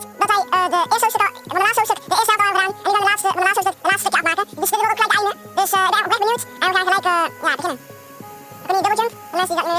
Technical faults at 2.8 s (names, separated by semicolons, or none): wrong sample rate